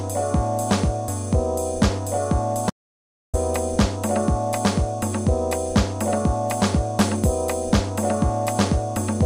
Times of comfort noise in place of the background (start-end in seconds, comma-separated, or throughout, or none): none